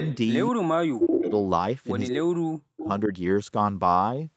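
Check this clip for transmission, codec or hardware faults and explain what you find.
Two call-path faults stand out, both tied to echo cancellation on a speakerphone-style link.

Echo leak: At 0.00–0.17 s, 1.04–1.32 s, 2.07–2.16 s and 2.84–2.88 s, a delayed copy of the speech returns about 204 ms later. It is faint at the start but as loud as the speech near 1.04 s. The likely cause is a loudspeaker's output reaching its microphone and slipping past the echo canceller.

Speech suppressed in double talk: At 0.91–1.31 s and 2.10–2.88 s, the speech sinks almost to silence. At 3.06–3.12 s it only dips slightly. The likely cause is the canceller ducking the talker while echo overlapped.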